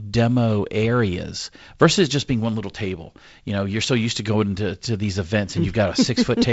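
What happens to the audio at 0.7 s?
Nothing goes wrong at 0.7 s: the speech there is intact, carried through G.722 wideband telephone coding with its band limit near 7.7 kHz and light coding hiss in the upper band.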